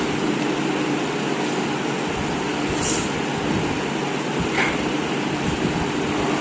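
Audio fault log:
Nothing stood out on listening, and the top end stopping at about 8 kHz is just what the G.722 call path and the call's microphone processing normally do.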